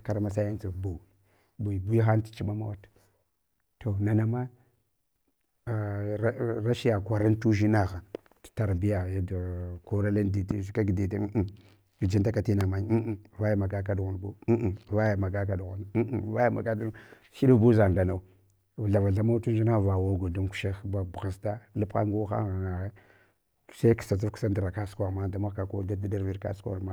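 Speech, interrupted by two loud pops, one at 10.51 to 10.53 s and another at 12.61 to 12.63 s, just after "gijun taka". Each is a single sharp transient lasting about 20 ms and peaking roughly 15 dB above the speech, which continues underneath. The likely cause is a brief electrical step or pulse entering the chain, such as a switch, connector or static discharge, which the following circuitry shapes into an audible thump.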